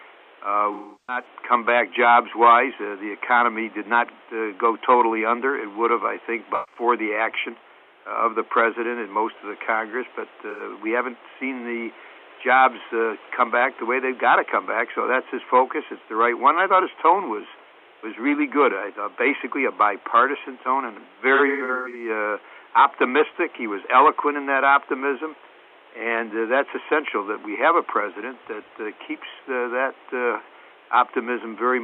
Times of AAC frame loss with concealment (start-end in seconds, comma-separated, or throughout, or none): 0.73-1.25, 6.54-6.81, 10.50-10.61, 21.34-22.09